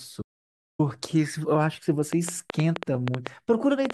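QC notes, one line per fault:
0.22–0.79 s, audio dropout to silence: speech stops dead for 570 ms, likely a lost input link; waveform shows a flat line, spectrogram a fully blank band.
2.13–3.91 s, train of clicks: about ten similar clicks at an irregular 5.6 per second, well above the speech, likely interference; thin vertical full-band streaks.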